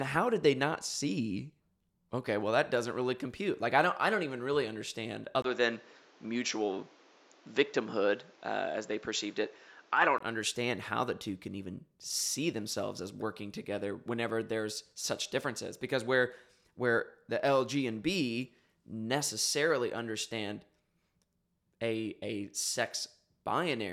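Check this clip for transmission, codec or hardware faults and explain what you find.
One fault is present, an input switched to a poorer device, from 5.42 s to 10.20 s. At 5.42 s there is a 20 ms gap, after which the speech turns dull and boxy, with nothing above 7.6 kHz and a new background noise floor roughly 30 dB below the signal, while loudness stays about the same. This is likely the capture path moving to a narrower-band microphone or headset profile, which then hands back to the original input at 10.20 s.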